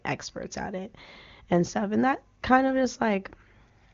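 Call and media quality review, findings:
No faults found; AMR-WB HD Voice path, nothing above 7.1 kHz.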